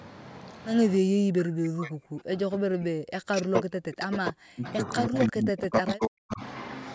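From 0.99 to 6.42 s, speech dips and breaks up, roughly 40 dB at worst. This is speech suppressed in double talk, likely echo cancellation.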